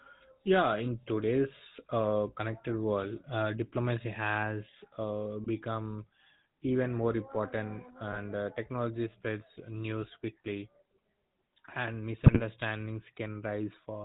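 The whole clip carries the sound of the GSM full-rate codec. Nothing above 4 kHz survives. Pulse-driven excitation gives the speech a buzzy, gravelly roughness, consistent with a 13 kbps GSM coder.

GSM bit errors then strike three times, at 5.44 to 5.51 s after "uh diplomacy has uh", at 8.12 to 8.18 s before "uh technology spreads news", and at 12.26 to 12.41 s. Corrupted frame parameters briefly distort the spectrum, producing squawks and gargling.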